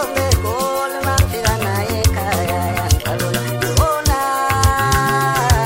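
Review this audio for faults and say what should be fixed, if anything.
No faults; nothing needs fixing.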